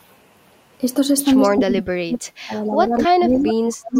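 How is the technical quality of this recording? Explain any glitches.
The recording has two audible call-processing problems from 1.45 s on.

Speech suppressed in double talk, from 1.45 s to 3.96 s: the speech repeatedly dips, for about two seconds in total, falling as much as about 40 dB at its deepest. This likely comes from an echo canceller unable to separate this talker from loudspeaker echo while both sides spoke, so it attenuated everything.

Echo leak, at 1.52 to 1.56 s, 3.0 to 3.08 s, 3.48 to 3.53 s and 3.95 to 4.0 s: short scraps of a copy of the speech arrive 246 ms late, at about 30, 10, 15 and 15 dB below the speech. These are likely residual loudspeaker pickup that the loudspeaker side's echo canceller failed to remove.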